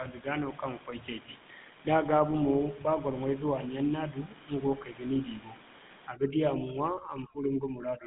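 The GSM full-rate codec colours the speech from start to finish. This early mobile codec models the vocal tract and excites it with sparse, regularly spaced pulses. The buzzy, gravelly roughness is plainly audible, fits a 13 kbps rate, and the band runs about 150 Hz to 3.6 kHz, with nothing above 3.8 kHz.

Overdone noise removal sets in at 6.07 s and lasts until the end at 8.06 s. A noise reducer set far too hard switches off frequency bands near its noise estimate, swallowing the room noise and quieter parts of the speech, leaving twinkling specks around the voice.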